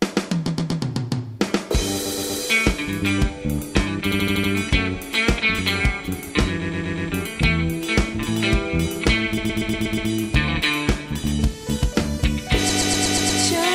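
Repeated frames stutter at 0.47, 2.05, 4.11, 6.61, 9.37 and 12.69 s: a 120 ms block (80 ms at 4.11 s) replays three to six times. On a waveform or spectrogram these show as identical tiled blocks.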